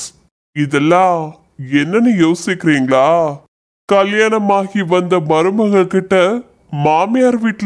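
From start to finish the speech runs at about 0.69 times normal speed and 6.5 semitones low, a wrong sample rate consistent with 32 kHz audio played at 22 kHz.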